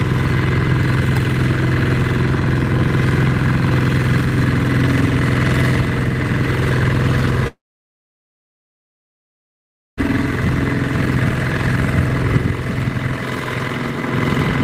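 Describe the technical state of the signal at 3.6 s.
At 3.6 s the signal is intact, with no audible fault at that moment.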